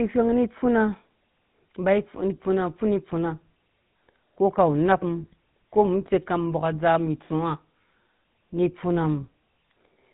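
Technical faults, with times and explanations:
Throughout: GSM full-rate codec. The speech has a plainly audible buzzy, gravelly roughness and nothing above 4 kHz, consistent with a 13 kbps GSM full-rate path: a vocal-tract model driven by coarse, regularly spaced pulse excitation instead of the real waveform.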